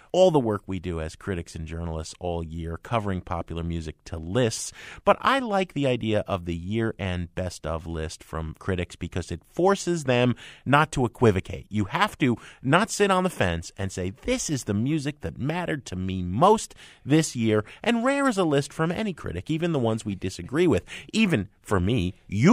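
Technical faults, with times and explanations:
There are no technical faults in this clip, so there are no times or explanations to give.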